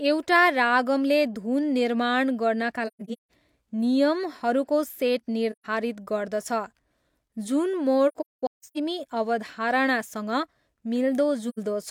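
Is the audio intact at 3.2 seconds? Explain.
No. AAC frame loss with muting hits from 2.87 to 3.30 s, just after "रागमले धुन निर्माण गर्नाका". Several lost frames, about 341 ms of audio in total, are scattered across roughly 0.43 s, and the decoder zeroed their spectrum. The overlapping transform windows fade the speech out and back in around each loss, so 3.2 s falls in a stretch of soft-edged holes, the longest about 150 ms.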